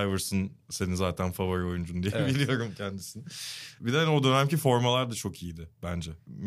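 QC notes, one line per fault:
No faults were heard in this speech recording. There is nothing to log.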